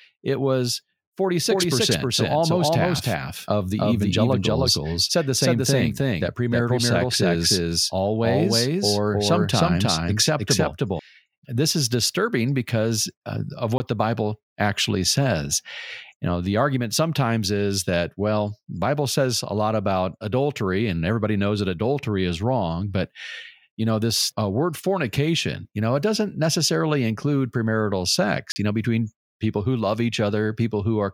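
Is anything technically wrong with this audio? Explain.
Yes. From 1.49 to 10.99 s the speech carries a doubled audio track, likely from the signal being captured a second time along a slower path. A second full-band copy, about as loud as the original, trails it by roughly 300 ms with no room colour, and it starts and stops abruptly.

Twice the system likely failed to deliver samples in time and zeros filled the gap, leaving a block of digital silence. The first, from 13.78 to 13.80 s right after "disturbing because uh of", is a 20 ms cut heard as a short hole. The second, from 28.52 to 28.56 s between "doesn't necessarily include premarital" and "you know between people", is a 40 ms hole.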